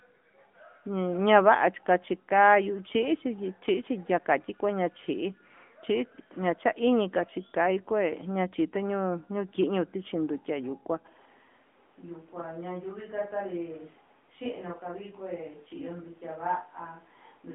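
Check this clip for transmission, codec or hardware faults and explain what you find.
Two faults are present: narrowband mobile coding throughout, and a change in pickup partway through.

From start to finish the speech sounds thin, boxed-in and buzzy, confined to roughly 200 Hz to 3.5 kHz with nothing above 3.6 kHz. This is the AMR narrowband mobile codec: 8 kHz sampling plus a pulse-driven vocal-tract model, with audible damage that fits a mid bitrate near 10 kbps.

From 11.08 s to the end, the voice abruptly turns roomy and hollow, loses bass, drops by about 10 dB, and picks up room noise roughly 25 dB below the speech. This is likely a switch to a distant microphone, replacing the close one.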